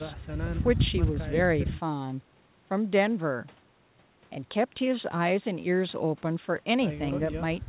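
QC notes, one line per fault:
No faults found in this speech recording.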